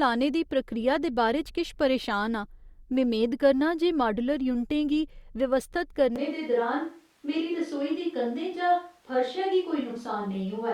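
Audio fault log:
6.16 s to end, switch to a distant microphone: the speech suddenly turns roomy and hollow, with thinner bass, and stays that way. The level barely changes, but room noise rises to about 35 dB below the speech. The close microphone likely dropped out.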